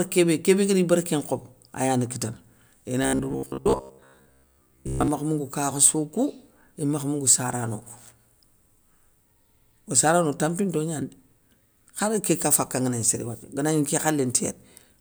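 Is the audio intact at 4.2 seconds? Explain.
No. At 4.2 seconds the speech has robotic sound from repeated short buffers, lasting from 3.03 to 5.08 s. The voice becomes a rigid, metallic buzz near 67 Hz. That fits a 15 ms slice likely replayed in place of most missing audio.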